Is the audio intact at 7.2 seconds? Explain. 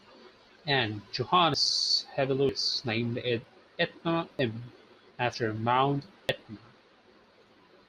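No. There is audio missing between chunks at 7.24 s. A short piece, roughly 50 ms, drops out and the sound on either side is butted together with no gap of silence, so the speech jumps forward abruptly. The likely cause is a recorder or processor handling the audio in 1-second chunks and losing a sliver at the boundary while it closes one chunk and opens the next.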